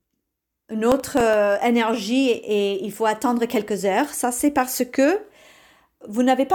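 From 0.92 to 1.34 s a gritty, tearing crackle rides over the speech and then clears just before "énergie et il faut". This is processor overload crackle: the processor fell behind and missed a run of buffer deadlines. Each miss let a sliver of old audio repeat with hard edges. The buffers were roughly 0.7 ms long, with roughly half a dozen or more failing in quick succession.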